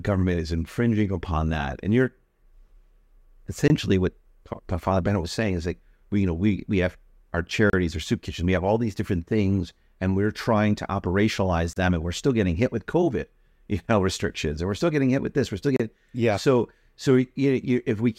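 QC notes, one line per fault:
3.68–3.70, 7.70–7.73, 11.73–11.76 and 15.76–15.80 s: gap at a join of encoded pieces. Every 4 s the speech drops into a 20 to 32 ms hole, then picks up where it left off, because separately encoded chunks were joined with their start delay and end padding still in.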